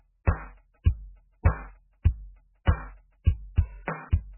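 The whole clip sounds heavily degraded. Nothing is audible above 3 kHz. The tone is watery and swirling, with smeared attacks. This is likely MP3 compression at a very low bitrate, around 8 kbps. The encoder cut the treble and dropped weak detail.

Pre-echo precedes sharp attacks at 0.83, 2.02 and 3.55 seconds. A short hiss leads each hit by about 23 to 26 ms. The codec spread noise across the whole block, into the quiet just before the attack. Each hit sounds softened.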